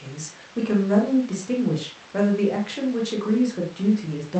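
No technical faults are audible.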